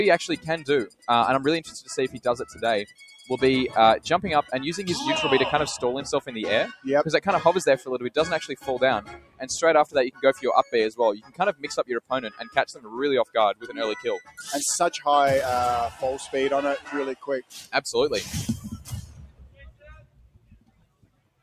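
A noise suppressor made for speech was applied to this sound throughout. It mistakes sustained material for noise, so the level pumps by roughly 15 dB.

Sound cut by the noise suppressor occurs at 0.87–1.08 s, 2.14–3.29 s, 8.53–8.68 s, 9.02–9.44 s, 9.85–13.78 s, 14.23–14.41 s, 16.79–17.74 s, and from 18.24 s to the end. Drops reach about 13 to 19 dB. Held sound and decaying tails sink while onsets come through.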